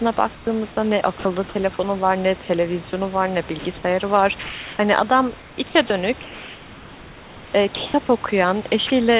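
From 0.35 to 0.47 s there is comfort noise in place of the background: the room hiss turns into a flat, featureless noise about 5 dB quieter, likely because discontinuous transmission stopped sending during the pause and the receiver synthesised a stand-in.

Sound dropped by the voice detector follows at 1.19 to 1.25 s, 2.90 to 2.93 s and 4.43 to 4.79 s. Each time, speech gives way to steady noise, briefly at first and for about a third of a second at 4.43 s. The likely cause is quiet speech being mistaken for background, so sending stopped.

From 5.39 to 5.90 s the speech is chopped by the voice detector. It sounds choppy, with parts of the speech cut out, likely from the detector switching on and off repeatedly.

From 6.23 to 7.94 s the background is again comfort noise, smooth and steady for over a second. The end of that stretch, 7.76 to 7.94 s, also has speech dropped by the voice detector, as does 8.87 to 8.90 s. 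Both are short cut-outs filled with the same steady noise. Throughout, nothing is heard above 4 kHz, which fits a telephone-band call codec.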